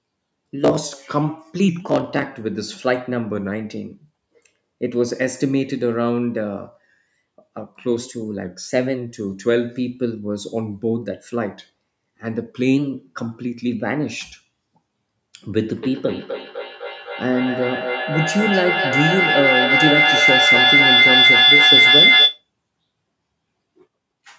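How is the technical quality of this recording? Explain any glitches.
The big issue is a feedback howl in the last stretch of the clip, sitting on top of call-processed speech that has nothing above 8 kHz.

From 15.83 to 22.49 s, a feedback howl takes over. Two devices in the same room on one call fed each other, and every trip round that loop came back louder. It narrows into a piercing whine near 4 kHz, with the loop repeating roughly every third of a second and peaking about 7 dB above the speech.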